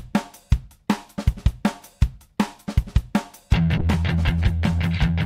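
A call bitrate drop from 3.78 to 4.91 s, consistent with roughly 64 falling to 22 kbps, makes the encoder code the audio more coarsely until the bitrate recovers.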